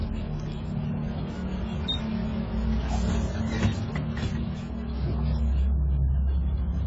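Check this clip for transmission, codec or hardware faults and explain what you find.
One codec fault runs through the whole clip: heavy AAC compression damage, likely from AAC-LC at around 16 kbps. Nothing remains above 7.6 kHz, and the sound is dull and smeared. The warbling, fizzy texture from coarse spectral quantisation distinguishes it from a clean low-pass filter.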